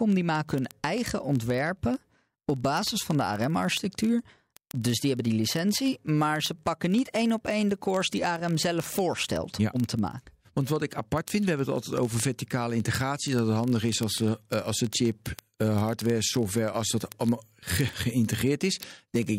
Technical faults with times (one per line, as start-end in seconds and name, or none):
0.10-19.37 word clock ticks